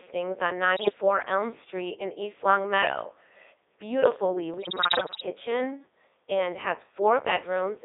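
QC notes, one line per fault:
Throughout: Codec 2 vocoder. The speech has that robotic, buzzy quality you get when nothing of the original waveform survives. The decoder is just rebuilding it from sine waves using pitch, voicing, energy and a rough spectral envelope, which fits a 3.2 kbit/s mode. It's band-limited to roughly 300 Hz to 3.7 kHz, and the damage is heavy, so the voice sounds synthetic rather than recorded.
0.76 to 0.98 s and 4.54 to 5.26 s: bit errors on digital voice radio. In both stretches the voice suddenly lurches in pitch, loudness and tone colour, breaking into warbles and bleepy gibberish. At a bit error rate of roughly 7 percent, flipped bits corrupt the few parameters each frame carries, so whole frames get resynthesised with the wrong pitch or spectrum. The second burst is longer.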